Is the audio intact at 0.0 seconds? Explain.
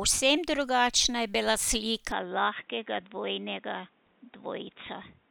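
Yes, the speech at 0.0 seconds is intact, with no audible dropout, click, distortion or other fault at that moment.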